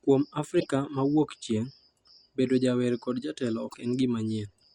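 At 0.56 s the speech breaks into a short glitch lasting to 0.66 s. This is damaged data in a compressed stream. Bytes in the file are wrong, so the decoder misreads those frames and loses sync. It then hunts for the next valid frame header. The same fault returns from 3.65 to 3.75 s, just after "bedo jawer kod jatelo". Each blip lasts about a tenth of a second.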